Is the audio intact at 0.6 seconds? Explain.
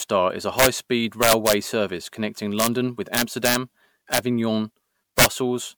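No. From 0.59 to 0.66 s, just after "is a", there is integer overflow. The loudest peaks exceed full scale by about 3 dB and wrap to the opposite sign instead of limiting, producing harsh cracks far sharper than clipping. On the waveform, peaks snap from top to bottom rail, with bright vertical streaks on the spectrogram.

Under this lies generation loss, likely from repeated MP3 encoding at 128 kbit/s, around four passes. It sounds swirly, hollow and smeared, with blurred attacks. The spectrogram shows patchy holes and nothing above 20.9 kHz.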